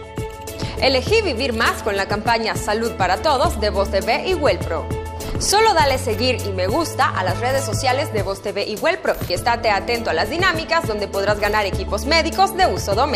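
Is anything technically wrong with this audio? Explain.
Yes. Throughout, the audio likely passed through MP2 compression with too few bits, consistent with about 80 kbps, so upper sub-bands switch off and flicker, leaving it dull, gurgling and granular.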